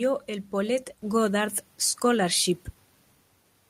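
At 1.02 s there's a microphone volume stepped up moment: the level jumps by about 5 dB in one go. What's happening is the call software decided the mic was too quiet and bumped the device's input volume in a single step rather than easing it up. You hear the voice and the room noise behind it both get louder at the same instant, which gives it that abrupt, switched feel.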